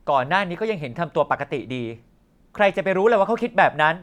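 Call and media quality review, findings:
Nothing stood out on listening to the speech, so there are no findings to log for this ticket.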